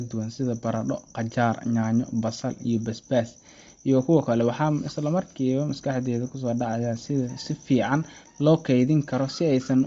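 Throughout, the audio was likely squeezed by Bluetooth LC3 compression at a low bitrate. The speech is cut off above 7.7 kHz and carries plainly audible grainy, breathy codec damage.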